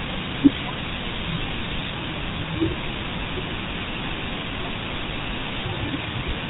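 From start to finish the speech carries GSM full-rate codec damage, plainly audible. The vocal tract is modelled and excited by sparse regular pulses, giving a buzzy, gravelly roughness, with nothing passing above 4 kHz. The 13 kbps rate fits this early mobile codec.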